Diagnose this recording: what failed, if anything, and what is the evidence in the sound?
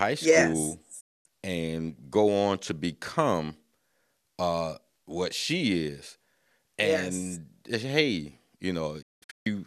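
A digital broadcast dropout at the broadcast receiver. Speech fades out within 8 ms at 1.00 s and returns at 1.26 s. From 9.02 to 9.47 s it breaks into several holes, the longest 192 ms. The receiver muted bad frames, so that audio is gone.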